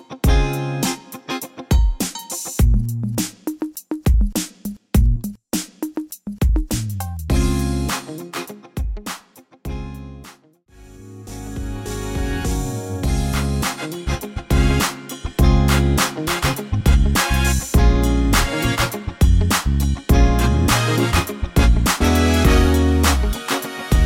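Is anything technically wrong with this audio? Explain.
No, nothing technically wrong here.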